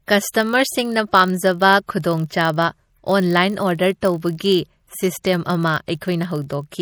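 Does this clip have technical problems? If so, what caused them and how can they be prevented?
Yes. Throughout the speech there is a watery, swirly texture with metallic chirps on s sounds and softened attacks. This is likely MP3 compression at a bitrate low enough to fit about 48 kbps, where the encoder drops the treble and starves weak frequency lines. Encoding at a higher bitrate, or keeping a lossless copy, prevents it.

A steady low buzz at 46.9 Hz runs under the whole clip, and the audio plays very slightly slow, at 0.999 times normal speed, with no noticeable pitch change. This is a block size mismatch (padded): one stage writes blocks slightly shorter than the next reads, which fits a 1024-sample read block, and pads the remainder with zeros. Matching the block sizes of the two stages prevents it.

Brief hiss appears just before sharp attacks, which then sound smeared: 0.31 to 0.34 s (38 ms), at 2.02 s (17 ms), at 4.01 s (15 ms), and 6.00 to 6.02 s (20 ms). 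This is pre-echo, where the codec spreads quantisation noise across the whole block into the quiet moment before the onset. An encoder with block switching or temporal noise shaping, or a higher bitrate, prevents it.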